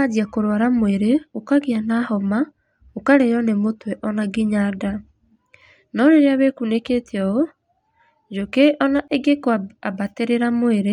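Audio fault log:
9.08–9.10 s, gap at a join of encoded pieces: a 25 ms silence cuts into continuous speech, and the sound then resumes exactly where it stopped. Two separately encoded pieces meet here, and the encoder's start-up delay and last-frame padding were kept instead of trimmed. Unlike a dropout or lost packet, no speech goes missing; silence is inserted, and the codec smears the edges, so the silent part is shorter.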